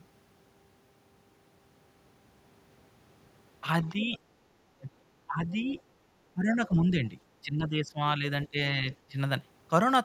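From 3.84 to 4.19 s, 4.8 to 4.9 s and 5.27 to 5.77 s, the speech dips by roughly 10 to 15 dB. Between 6.34 and 9.17 s it dips again in pieces, for about half that stretch. This is speech suppressed in double talk, likely from an echo canceller turning the talker down while the far side spoke. It differs from network dropouts because the speech is turned down while the far side is playing. From 5.67 to 5.81 s and 8.92 to 8.96 s, faint scraps of the other side's voice leak through, about 30 to 35 dB below the speech. They likely come from echo the canceller missed. This sounds like a separate second voice, not a repeat of the talker.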